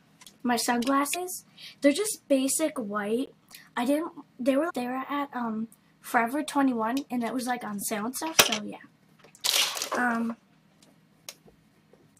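A brief glitch breaks the audio at 1.14 to 1.16 s and again at 4.69 to 4.71 s, the sound of damaged data in a compressed stream, where the decoder stumbles over corrupted frames and resynchronises at the next header. At 3.26 s a short hole marks a block of digital silence about 17 ms long, a dropout with abrupt edges likely from an output buffer not filled in time.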